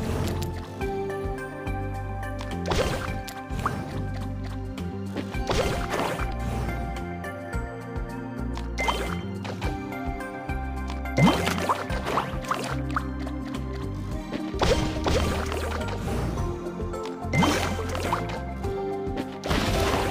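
At 6.28 to 6.33 s, 8.50 to 8.55 s and 12.61 to 12.65 s, damaged data in the compressed stream breaks through. Each burst lasts about 40 ms. The decoder misreads corrupted frames, loses sync, then relocks. Each event sounds like a short, harsh blip.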